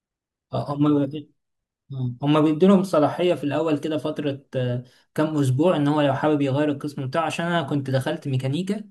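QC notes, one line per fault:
No audible faults found on review of this speech clip.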